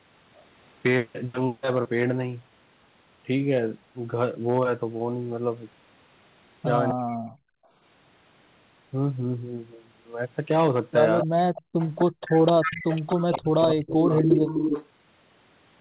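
Hard clipping runs through the whole clip. The speech was driven about 6 dB past what one stage could pass. Only a small share of samples, around half a percent, hit the ceiling. Those peaks are sliced flat. Each flat top adds harsh upper harmonics. On the louder syllables this comes through as a gritty crackle, not a steady fuzz. The rest of the speech sits below the limit.

At 6.89 s a short echo leak appears, lasting until 6.94 s. A copy of the far side's speech comes back 253 ms late, roughly 10 dB below the main speech. It is only a brief scrap. The likely cause is a loudspeaker on the other end whose echo canceller let part of its microphone pickup through.

Right after, from 6.93 to 7.28 s, the speech is suppressed in double talk. The level falls sharply, by around 40 dB at its deepest, for about 300 ms. The talker's sound fades and breaks up. Both sides were probably talking at once. 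The canceller then likely could not tell the local talker from the echo, so it pulled both down.

From 7.56 to 7.71 s the background is gated by the echo canceller. The room sound drops by about 40 dB for around 150 ms. Then it returns. The canceller clamped the microphone while the loudspeaker played, then let go.

The echo leak comes back at 11.2 s and lasts until 14.87 s. The delay is again 253 ms, now only about 5 dB below the speech. It is a long trail.

Within it, from 11.24 to 11.31 s, there is another short double talk dip of about 40 dB.

Background gating returns between 11.62 and 12.21 s. It cuts the room sound in and out for about 300 ms in total.

The longest suppression runs from 12.61 to 14.28 s. Here the speech drops by about 35 dB at its deepest. The dips add up to about a second. The top end of the whole clip stops near 4 kHz, which fits a G.711 call codec.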